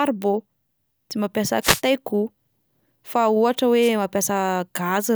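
At 1.61 s, right after "tsy mampiasa", a wireless microphone noise hit lasts about 0.2 s. A second, shorter one follows at 3.81 s, after "fa ohatra", for about 80 ms. Each is a brief swish of static over the speech. The radio link from the analogue FM microphone faded as reflected signals cancelled the direct one, so receiver noise rose into the audio before the signal recovered.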